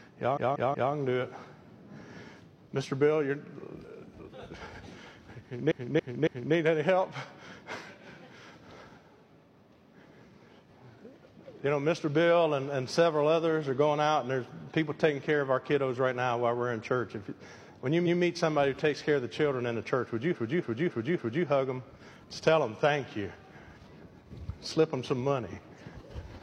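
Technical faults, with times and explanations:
0.33–0.89 s, 5.67–6.51 s, 18.02–18.16 s and 20.30–21.41 s, repeated frames: short blocks of the compressed stream are played again back to back, a 185.8 ms block three extra times, a 278.6 ms block three times, a 139.3 ms block once, and a 278.6 ms block four times. Each is heard as a mechanical stutter. The waveform shows identical segments tiled in a row, and the spectrogram shows copied patterns.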